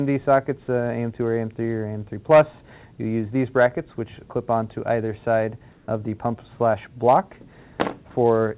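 From 5.72 to 5.88 s, the real background drops out for 160 ms. A smoother, steadier noise takes its place, about 3 dB quieter than the true background, which itself sits about 33 dB below the loud parts. The likely cause is comfort noise in place of the background. The sender stopped transmitting during a detected pause, and the receiver filled the gap with synthetic noise. Nothing is heard above 4 kHz, which fits a narrowband G.711 call path.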